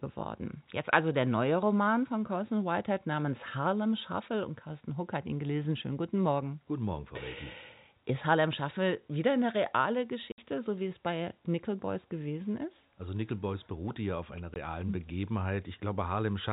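Packet loss filled with silence: lost packets became dead air, leaving hard-edged gaps of 60 ms at 10.32 to 10.38 s after "wieder eine reale", and 20 ms at 14.54 to 14.56 s after "beruhte ja auf einer".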